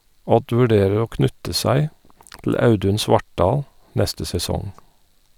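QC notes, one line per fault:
No faults heard in this speech recording.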